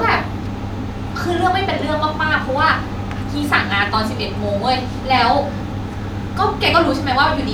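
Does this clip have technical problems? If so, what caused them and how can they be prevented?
No, this clip has no technical problems, so there is nothing that needs preventing.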